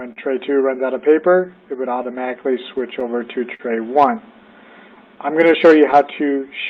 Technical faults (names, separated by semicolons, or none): clock drift between sender and receiver; repeated timing corrections; short stall from a late packet; scattered short gaps